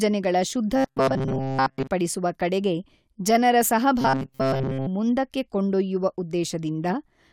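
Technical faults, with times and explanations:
0.76–1.87 s and 4.01–4.87 s, robotic sound from repeated short buffers: the speech becomes a stiff, metallic buzz locked at 133 Hz that still loosely follows the syllables. The first stretch ends just before "ಕಡೆಗೆ ಜನರ" and the second begins right after it. The likely cause is audio arriving too seldom, so a fragment of about 7.5 ms is replayed for most of each stretch while the real audio is skipped. That loop rate sets the fixed pitch.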